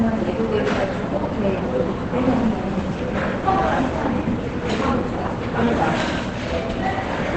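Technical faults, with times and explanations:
Throughout, Opus compression, likely in speech mode at a low rate: the sound is muffled and hoarse, with nothing above 8.5 kHz, which fits about 16 kbps wideband.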